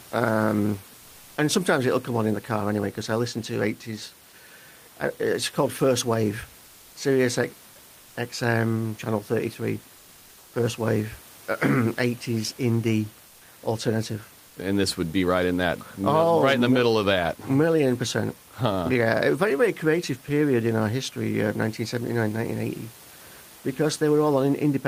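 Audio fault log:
6.67 s to 6.91 s and 13.27 s to 13.39 s, comfort noise in place of the background. In two pauses, lasting 240 ms and 120 ms, the room noise, about 28 dB below the speech, gives way to a flat, featureless hiss. It sits about 30 dB below the loudest parts and about 1 dB quieter than the real background. The likely cause is Opus discontinuous transmission. The sender stops during the pause and the receiver fills the gap with synthetic noise.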